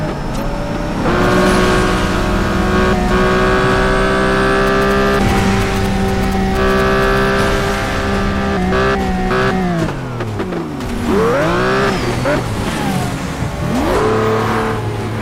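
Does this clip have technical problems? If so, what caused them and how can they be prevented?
Yes: from 4.67 to 7.18 s, galloping ticks and short 217 Hz buzzes, roughly 10 dB under the audio, reveal GSM signalling bursts from a nearby 2G phone, rectified by the audio circuitry. Keeping phones away from the equipment, or switching them off or to flight mode, prevents this.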